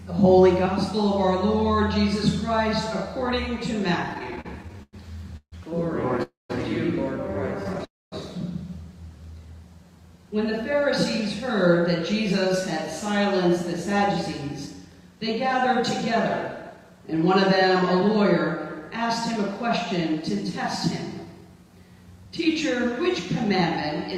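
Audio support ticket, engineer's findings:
Repeated stalls (stutter), 4.09–5.54 s and 7.63–7.81 s. Sound drags and breaks up: 13 short gaps in the first span, longest 150 ms, about a quarter of it filled; 4 tiny gaps in the second. Jitter buffer repeatedly running dry on late packets. Receiver extends the last sound each time. Nothing lost, only delayed.

Call audio freeze, 6.23–6.51 s and 7.85–8.14 s. Playback halts about 0.27 s each, held sound fading to silence (160 ms, then 230 ms), then resumes where it stopped. Likely packets held up in transit, jitter buffer emptied. Gap inserted, no content missing.

Jitter buffer speed-up, 10.17–15.66 s, 16.55–20.20 s, 21.15–21.70 s. Sound runs fast at unchanged pitch: 104 % in the first two spans, 112 % in the last, hurried feel in the last. Receiver trimming pitch-period-sized slices to drain excess buffered delay, roughly 0.3 s, 0.15 s and 70 ms.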